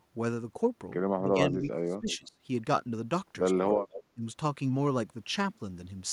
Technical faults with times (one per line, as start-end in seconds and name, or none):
1.24-2.37 speech suppressed in double talk
2.10-2.28 echo leak
3.83-4.03 echo leak
4.15-4.23 speech suppressed in double talk